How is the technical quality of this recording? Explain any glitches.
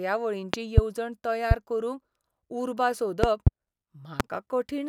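The recording has four loud pops on top of the speech. Two are double pops, at 0.54 to 0.81 s and 3.24 to 3.50 s, and two are single clicks, at 1.51 to 1.54 s and 4.20 to 4.23 s. They jump roughly 20 to 25 dB above the speech, which carries on underneath. The likely cause is a sudden voltage step from something like a plug, a switch or static. The downstream circuitry shapes each step into a sharp thump.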